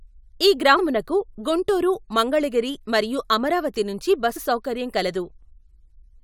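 At 0.76 to 0.80 s and again at 4.35 to 4.38 s, compressed frames are skipped: the speech jumps ahead by about a tenth of a second as lost frames vanish. Each join shows a visible discontinuity on the spectrogram.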